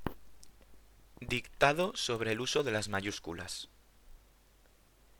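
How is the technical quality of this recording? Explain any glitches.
The recording has one fault. A block size mismatch (padded) runs throughout. One stage hands over blocks slightly shorter than the next reads, and zeros fill the shortfall. The resulting gaps buzz at 43.1 Hz, which fits a 1024-sample block. Playback slows to 0.999 times speed, with pitch barely changed.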